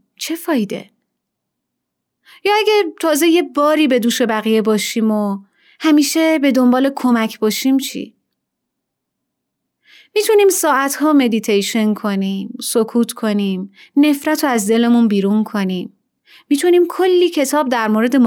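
No technical faults can be heard anywhere in the recording. Nothing in the signal calls for comment at any point.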